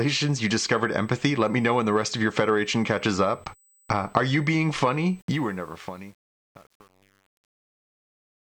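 Current drawn by the USB bus in its 125-microsecond microframes is leaking into the audio through power or ground, so a USB whine at a fixed 8 kHz sits under the speech from start to finish, roughly 35 dB below it.

From 5.19 s, just after "are you being funny", a digital fade is truncated without dither. The steps fit a stage keeping only about 9 bits. This truncation distortion on the fade turns the waveform into coarse square steps and makes the tail gritty, worst from 5.52 s to the end.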